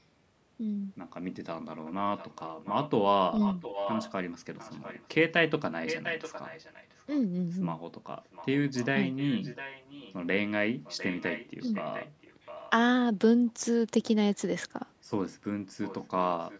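Speech with an echo leak: a quieter copy trails about 0.7 s behind at 1.85–2.9, 3.4–4.12, 4.57–5.08, 5.86–7.04, 8.31–10.14, 10.84–12.7, 15.82–16.05 and 16.46 s to the end. It's likely a loudspeaker echo the far end's canceller didn't fully remove.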